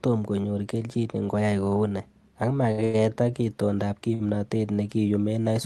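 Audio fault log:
2.71–2.80 s and 2.84–2.96 s: short stall from a late packet, twice. Each time a packet of this speech arrived late and the jitter buffer ran dry. The receiver held the last sound for about 65 ms, then about 98 ms, and resumed where it left off. Nothing is lost, but the sound hangs unnaturally with a faint buzz or dip, and playback ends up that much later. The Opus call path is audible as the usual coding haze, with highs cut above 12 kHz.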